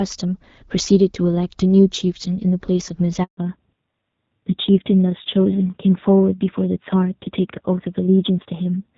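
At 3.23 s the speech cuts out abruptly, fading within a few tens of milliseconds, and stays silent for 140 ms until 3.37 s. This is a handover gap: the call was switched from one network link to another, and no speech frames got through while the switch was underway, so whatever was said in that short window never reached the listener and cannot be recovered.

From 3.37 s to the end, the speech sounds noticeably duller and rougher, losing the crispness it had before. That change is a fallback to narrowband. Up to the gap, the light coding of the HD Voice wideband codec suggests AMR-WB at around 12.65 kbit/s. After the switch the call drops to the older narrowband codec, and nothing above 4 kHz remains. The grainier texture fits a low narrowband rate such as AMR-NB at 7.4 kbit/s.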